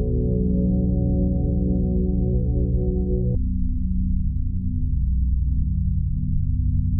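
From 3.35 s to the end, the music drops to half speed, sounding deep and sluggish, about ten semitones lower: a section at the wrong speed, likely played against the wrong clock.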